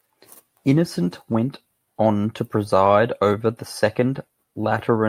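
Clock drift between sender and receiver runs through the whole speech clip. The sender's clock is about 4% slow. The receiver's buffer keeps draining. It must fill the gaps to keep playing. Small timing hiccups recur at uneven intervals.

Repeated timing corrections run from 0.44 s to 5.02 s. The receiver repeats short pieces again and again. This stretches the speech to about 96% speed. Roughly a fifth of a second is added overall. Each edit is small.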